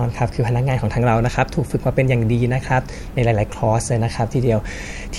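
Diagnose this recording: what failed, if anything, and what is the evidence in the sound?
Nothing in this speech recording points to a failure at any stage of the chain, so there's nothing here to diagnose.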